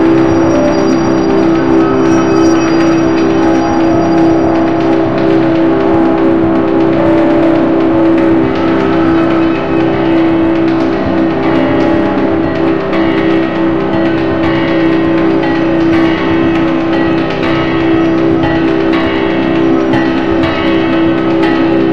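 Sound recording with hard clipping running through the whole clip. The level is driven about 5 dB beyond what the stage can pass, so around one percent of samples are cut flat at the ceiling. Those squared-off peaks add high harmonics, heard as crackle on the loudest moments.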